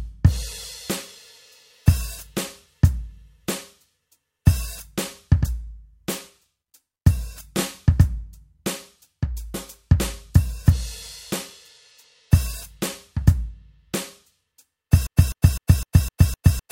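At 15.07 s the music falls into a broken-record loop, likely from a stalled player or stream resending its last fragment. A 254 ms piece repeats six times to the end, replacing the real music. Waveform and spectrogram show identical blocks tiling every quarter second.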